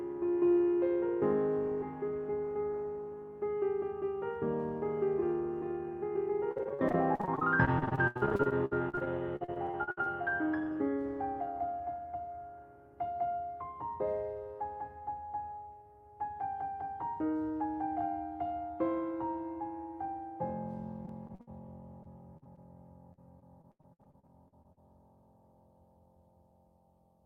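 Repeated packet loss (robotic sound) chops the audio at 6.51–10.08, 21.06–21.49, 22.03–22.59 and 23.13–24.79 s as concealment stretches the last sound over holes up to 79 ms, leaving smeared, stuttering bands on a spectrogram.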